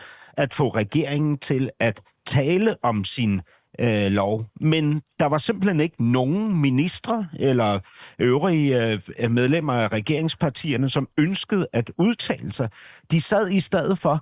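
Nothing stood out as a technical fault on listening to the speech in this recording.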